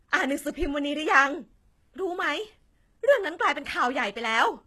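Throughout the speech, codec damage is plainly audible. Nothing reaches above 12.3 kHz. The treble sounds rebuilt, copied up from lower bands, so harmonics do not line up across the crossover. This is likely HE-AAC compression, which fits a 16 kbps stream.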